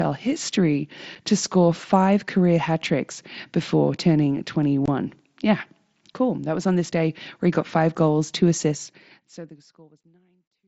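Voice packets between headset and phone were dropped with nothing filling the gaps, which is unconcealed Bluetooth headset packet loss. At 1.15 s, just before "to score five career", a hole of about 7.5 ms opens with hard edges. At 4.86 to 4.88 s, after "hat tricks before turning", a longer 22.5 ms gap fits three lost frames and sounds like a brief chop. A single short hole at 10.03 s falls inside the closing fade.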